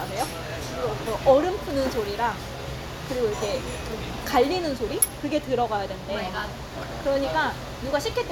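Nothing in this recording of sounds stood out as a technical problem on listening.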